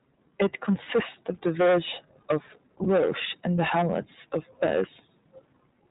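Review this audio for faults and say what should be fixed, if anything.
The whole thing has gone through the iLBC codec. Nothing above 4 kHz survives, and the speech has that slightly rough, synthetic edge you get from frame-by-frame excitation coding, which fits the 15.2 kbps mode with 20 ms frames. To avoid it, send a wideband codec like Opus when the link allows.

There are also two spots of lost iLBC frames, at 0.84–0.87 s and 2.84–2.87 s, each sounding like one dropped 20 ms frame. The decoder patches each gap by repeating the last pitch cycle with some noise, so you get a brief buzzy, held vowel. Because iLBC frames don't depend on each other, the speech snaps back right away. Adding jitter buffering and FEC or redundancy on the network path would cut these losses.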